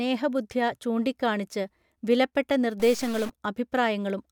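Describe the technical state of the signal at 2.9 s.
At 2.9 s the signal is inside a stuck bit fault running from 2.80 to 3.30 s, starting right after "ചൂണ്ടികാണിച്ച് വിലപ്പെട്ട". The sound turns harsh and buzzy, and low-level passages pick up a gritty noise floor. This is likely one sample bit held at a fixed value, which knocks about half the samples off by that bit's weight, a step of about -35 dBFS, in a pattern that follows the waveform and flips with the sign of small values.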